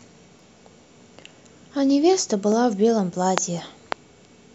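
From 0.39 s through to about 3.58 s there's a click in the speech roughly every 1.06 s, four or so in all, evenly spaced regardless of what's being said. That steady rhythm is the giveaway for clock drift buffer slips, most likely from two devices running on separate clocks, one off by something like a few hundred ppm. The buffer between them creeps until a short block, somewhere around a dozen-odd samples, gets dropped or repeated, and each slip lands as a tick.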